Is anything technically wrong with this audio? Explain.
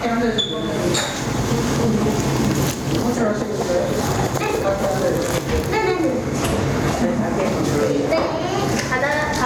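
Yes, there's gain pumping all the way through. The background swells up in every gap and then ducks by something like 15 dB under each loud sound, leaving everything squashed together. Likely the input gain is set far too high and a fast limiter keeps clamping down on the peaks.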